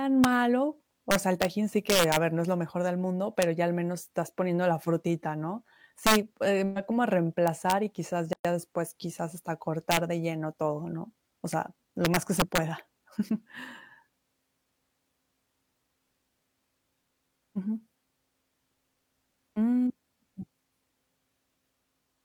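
Speech with integer overflow on its loud peaks. Where the level pushes past the top of the integer range, samples wrap to the opposite sign instead of being limited, so each peak jumps across the full scale and produces a harsh crack, far sharper than clipping would. This happens at 0.24 s, 1.11–1.45 s, 1.90–2.17 s (just before "ver no es lo"), 3.42 s, 6.07–6.16 s, 7.48–7.72 s (between "em va como a" and "y quizás"), 9.91–9.97 s and 12.05–12.58 s, with overdrive from about 0 dB to about 4 dB. There is also a gap at a join of encoded pieces at 8.33–8.45 s, between "y quizás" and "después quizás hasta". A gap of about 117 ms cuts into continuous speech with smeared edges, then the speech resumes where it stopped. This fits separately encoded segments spliced without trimming the encoder's start-up delay and end-of-stream padding.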